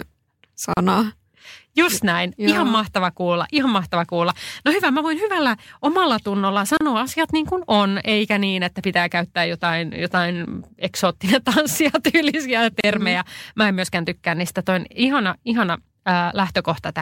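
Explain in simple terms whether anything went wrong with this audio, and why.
There's a gap at a join of encoded pieces every 6 seconds, at 0.74, 6.77 and 12.81 s: brief silences of about 35 ms, left where separately encoded chunks were stitched together. The middle gap falls right after "voin hyvällä omalla tunnolla", and the last right after "jotain eksoottinen tanssia tyylisiä".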